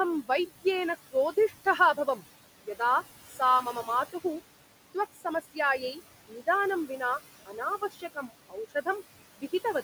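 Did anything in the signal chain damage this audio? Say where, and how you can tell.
Yes. In call processing there are noise suppressor artifacts throughout. Room noise, about 16 dB under the speech, is pulled down about 16 dB between phrases and rises again under the words.

Speech cut by the noise suppressor occurs at 1.11–2.21, 3.3–4.25, 4.95–6.47 and 7.46–8.87 s. Brief fragments drop about 16, 9, 18 and 16 dB and sound swallowed.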